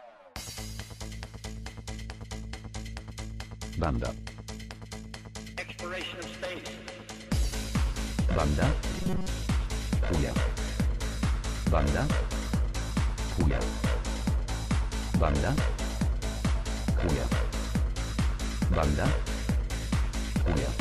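From 8.91 to 9.28 s, new audio likely arrived too seldom, so playback kept looping a short buffer of about 5.3 ms in place of most of the real material. This robotic sound from repeated short buffers becomes a rigid, metallic buzz at 188 Hz.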